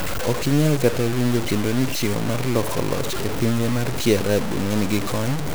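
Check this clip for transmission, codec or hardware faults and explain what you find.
One fault runs through the whole speech clip: low bit depth without dither. Grainy distortion tracks the speech and quiet passages sputter or drop out, likely from truncation to 4 bits, leaving noise roughly 10 dB below the signal. Unlike hiss, it moves with the sound.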